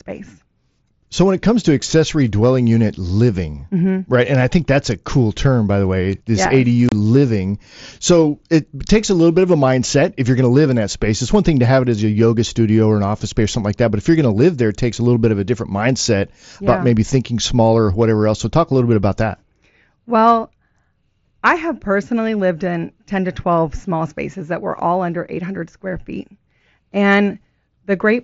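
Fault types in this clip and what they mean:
Unconcealed Bluetooth headset packet loss: between 6.89 and 6.92 s the speech drops out for about 30 ms, with abrupt edges on both sides of the gap. The hole fits roughly four lost voice packets on the headset-to-phone link, replaced by silence or an idle fill rather than an estimate of the missing sound. The gap is heard through the wideband mSBC path, whose 8 kHz audio band and light grain remain.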